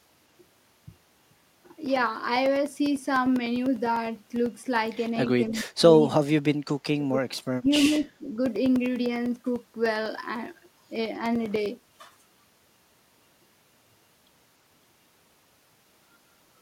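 A speech recording carries two separate faults. Periodic USB or driver dropouts run from 0.06 s to 16.56 s. Every 0.1 s, a couple of milliseconds of signal vanish into silence, leaving a steady ten-per-second ticking that rides only on the voiced parts. That strict clock-like spacing, heard only under signal, separates it from random clicks or packet loss, which arrive irregularly. Separately, the voice is pulled down in three bursts at 5.53–6.46 s, 6.64–7.41 s and 7.59–8.36 s. The first two sink by about 35 dB and the third by about 15 dB. This is likely speech suppressed in double talk, an echo canceller attenuating the near talker while the far side speaks. Unlike a noise gate, the cuts hit mid-speech in grouped stretches rather than only at pauses.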